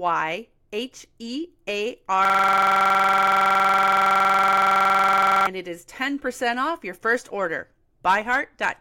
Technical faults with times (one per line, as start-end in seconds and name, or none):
2.25-5.47 system hang loop